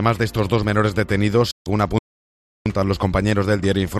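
At 1.51 s a digital broadcast dropout occurs. The sound fades out in about 8 ms and stays silent until 1.67 s. About 144 ms is lost, which fits roughly six failed frames.

From 1.98 s to 2.66 s there is a playback stall. The output goes silent for about 0.67 s, likely because the player ran short of data.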